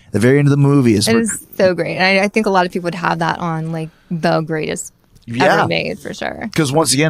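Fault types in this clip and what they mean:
No faults can be heard anywhere in this speech clip. There are no dropouts, clicks, distortion or timing glitches at any point.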